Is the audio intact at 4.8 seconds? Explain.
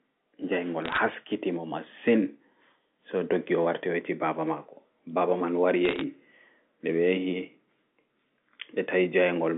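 Yes, the speech at 4.8 s is intact, with no dropout, click or distortion at that moment, and the audio carries only the narrow, band-limited sound of ordinary telephone coding.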